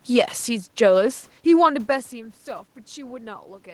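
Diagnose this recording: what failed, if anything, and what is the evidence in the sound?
Nothing in the recording stood out as a failure at any stage; the background noise is the room itself, and the level shift around 1.5 s is the talker moving relative to the microphone.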